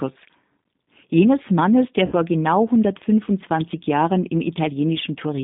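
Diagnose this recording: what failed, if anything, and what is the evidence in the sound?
Throughout the speech, the sound is rough, slightly synthetic and confined to a narrow band of roughly 150 Hz to 3.7 kHz, with nothing above it. That points to the G.729 codec at the codec stage, which fits 8 kbit/s. It resynthesises speech from a vocal tract filter, pitch predictor and a few pulses per frame, so the damage is plainly audible.

From 2.06 to 2.14 s, the speech smears into a buzzy tone or coloured noise that fades, and stays weakened briefly afterwards. This is VoIP packet loss concealed by the speech codec, a network-stage fault. About 60 ms of audio went missing, which fits three lost packets. The decoder extrapolated from its last pitch and filter, and its decaying state slowed recovery.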